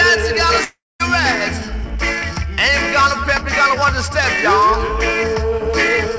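From 0.64 s to 1.02 s the sound breaks off and is carried on as a fading buzz that thins out into about 210 ms of silence before the audio returns with roughly 360 ms missing. This is likely a long network dropout: packets stopped arriving, the receiver stretched the last sound to cover the gap, then gave up. The whole clip is band-limited to 8 kHz, which fits a wideband call codec.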